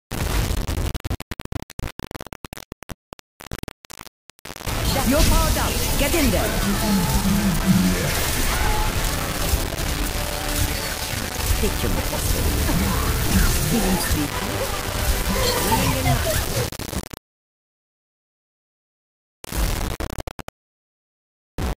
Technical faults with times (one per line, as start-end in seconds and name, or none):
0.00-21.76 low bit depth without dither